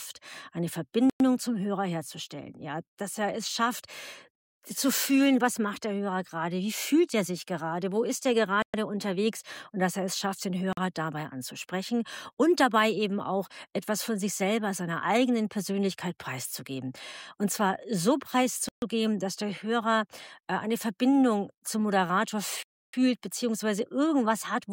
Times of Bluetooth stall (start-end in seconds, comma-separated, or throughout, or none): 1.10-1.20, 8.62-8.74, 10.73-10.77, 18.69-18.82, 22.63-22.93